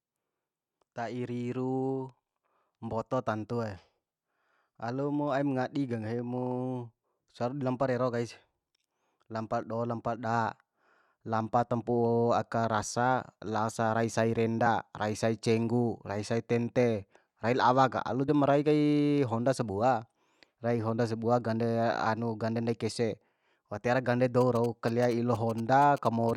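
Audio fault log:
14.65 s and 18.28 s: damaged data in a compressed stream. Each is brief, after "laosa rai sai" and after "rai la awa ka". Corrupted bytes there make the decoder misread frames and lose sync. It then jumps ahead to the next valid frame header.
24.41 to 26.31 s: GSM signalling bursts. After "tiara gande", a galloping run of short buzzes at 217 Hz sits roughly 20 dB below the speech. A nearby 2G phone is signalling, and the audio circuit rectifies its radio bursts.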